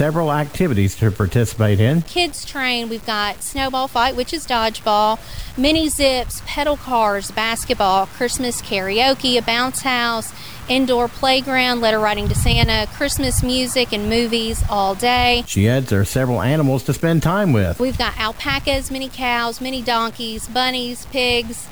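Throughout the clip the sound is grainy and gritty, with distortion that tracks the signal, likely low bit depth without dither: about six-bit truncation. The waveform shows visible stair-steps, and the spectrogram shows a raised, signal-following noise floor roughly 25 dB down.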